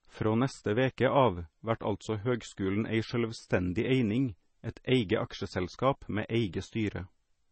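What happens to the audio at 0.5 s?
At 0.5 s, as throughout the speech, the sound is watery and swirly, with nothing above about 8.3 kHz. This is likely heavy MP3 compression, pointing to a low bitrate near 24 kbps. Weak lines flicker in and out between frames. A spectrogram shows a flat ceiling at 8.3 kHz and speckled gaps below it.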